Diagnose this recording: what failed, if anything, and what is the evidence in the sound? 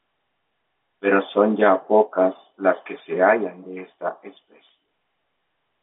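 Nothing stood out on listening: the speech sits within an ordinary telephone band, with nothing above 3.8 kHz, and no event in it points to a failed stage.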